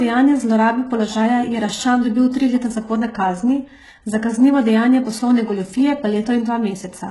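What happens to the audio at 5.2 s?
At 5.2 s the speech carries the same damage heard through the whole clip, likely HE-AAC compression. Only the lower spectrum is truly coded. The treble is rebuilt by copying lower bands upward and shaping them with a coarse envelope. Nothing survives above 11.5 kHz. The damage is heavy, which fits a very low bitrate near 12 kbps. The high end sounds false, not the original treble. S sounds come out gritty, metallic or lispy.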